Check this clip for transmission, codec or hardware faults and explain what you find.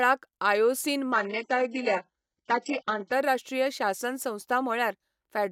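One fault: from 1.12 to 3.12 s the adaptive stream drops to a lower bitrate, apparently because the connection slowed. Treble vanishes above 8 kHz and codec artefacts rise, which points to a very low-rate HE-AAC version. Unlike packet loss, the quality changes abruptly without any gap.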